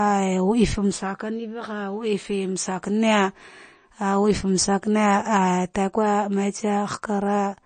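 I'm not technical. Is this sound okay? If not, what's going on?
No. The speech was likely squeezed hard by MP3 compression, so throughout it sounds watery and swirly, with everything above 9 kHz missing.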